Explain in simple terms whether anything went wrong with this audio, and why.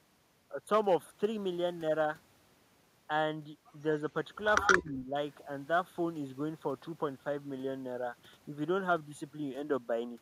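Echo leak, from 4.61 to 4.75 s: a short scrap of the speech comes back a second time, trailing the original by about 0.12 s, and it is fairly loud, even a little louder than the voice itself. The likely cause is a call where one side used a loudspeaker. Its microphone picked up the sound coming out of that speaker, and the echo canceller failed to strip it out, so the copy was sent back down the line.

Speech suppressed in double talk, from 4.79 to 5.15 s: right after that echo, the speech turns noticeably quieter for about four tenths of a second. This likely happened because both sides were talking at the same moment. The echo canceller could not tell the real talker apart from the loudspeaker echo, so it turned everything down together, and the genuine speech was turned down along with the echo.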